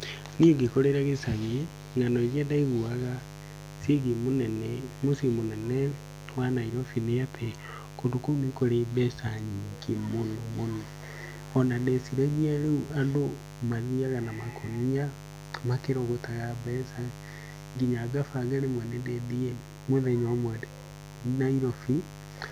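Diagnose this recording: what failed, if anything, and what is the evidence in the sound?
The analogue wiring failed: a dimmer, rectifier or broken shield is coupling switching spikes from the 50 Hz mains into the signal path. The speech carries a steady, raspy mains buzz from start to finish, sitting only about 15 dB below the speech. The spikes arrive twice per mains cycle, so the buzz is built on 100 Hz repetitions whose sharp edges spread harmonics of 50 Hz up into the kilohertz range. That gives it the rasp.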